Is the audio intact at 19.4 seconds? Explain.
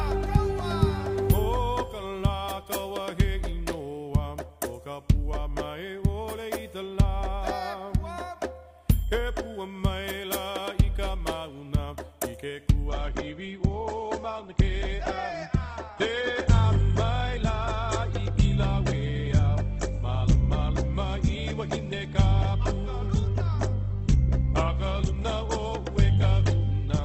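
No. At 19.4 s the audio is inside an adaptive stream at a lower bitrate, from 12.88 s to the end. The stream switches abruptly, without a gap, to a far leaner encoding, likely a drop from about 64 to 12 kbit/s Opus. Nothing above 8.2 kHz survives, and codec artefacts thicken.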